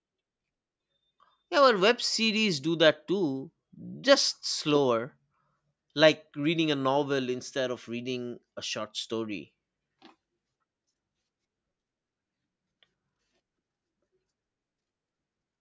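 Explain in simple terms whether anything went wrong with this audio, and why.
Nothing went wrong here.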